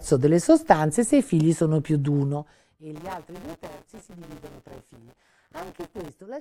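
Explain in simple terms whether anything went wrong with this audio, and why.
Zipper noise runs from 2.21 to 2.81 s, just after "figli sono più di". The volume is being turned down a long way, but instead of gliding smoothly it drops in small jumps, about 40 every second. Each jump leaves a tiny click, and together the clicks make a fine ticking or zipping sound that rides on the speech only while the level is falling.

Buffer tearing starts at 2.95 s and lasts until 6.09 s. Audio reaches the speaker in small chunks. Here the part filling each chunk and the part playing it have drifted out of step. About a fifth of every chunk is stale sound from roughly 20 ms earlier, with an abrupt join on each side. Those joins repeat about 172 times a second, which fits a 256-sample buffer, and give the speech a steady robotic buzz.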